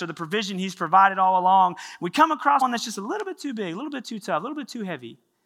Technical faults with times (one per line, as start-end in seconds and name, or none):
2.60 compressed frames skipped